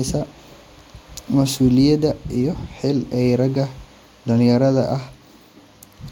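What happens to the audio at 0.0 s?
At 0.0 s the audio is intact, with no dropout, click, distortion or other fault.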